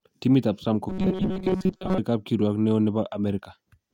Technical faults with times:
0.89-1.98 robotic sound from repeated short buffers

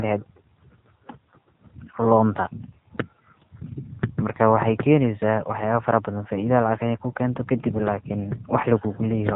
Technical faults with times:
0.00-9.36 AMR narrowband mobile codec

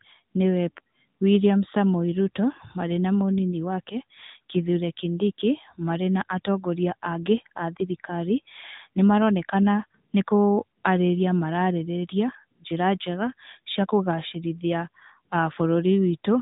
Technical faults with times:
0.00-16.41 AMR narrowband mobile codec

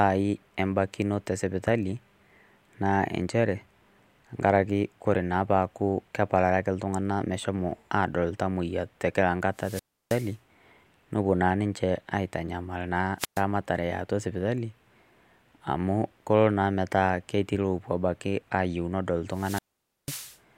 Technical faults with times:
9.55-10.35 wireless microphone squelch dropout
13.18-13.42 wireless microphone squelch dropout
19.31-20.38 wireless microphone squelch dropout

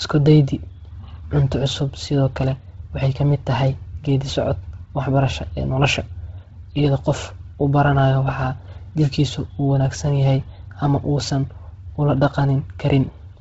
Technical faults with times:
0.00-13.41 Bluetooth LC3 compression

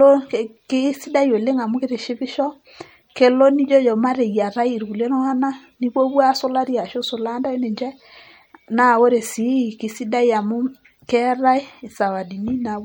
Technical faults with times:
0.00-12.84 MP3 compression

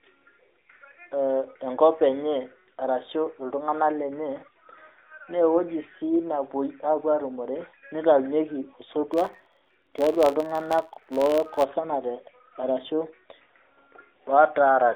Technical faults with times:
9.13-11.67 filter restarted on every block

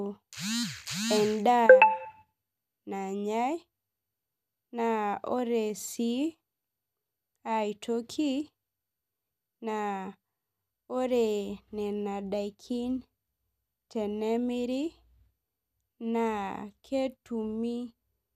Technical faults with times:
none

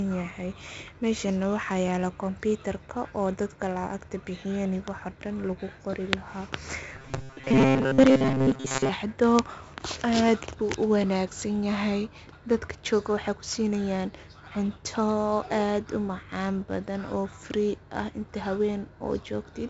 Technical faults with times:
0.00-19.69 4-bit ADPCM compression
6.93-8.89 robotic sound from repeated short buffers

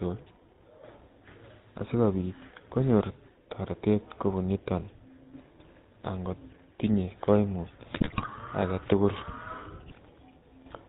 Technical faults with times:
0.00-10.88 GSM full-rate codec
7.92-8.28 GSM bit errors

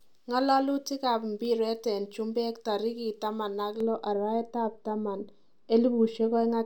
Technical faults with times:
3.80-6.65 de-emphasis applied wrongly

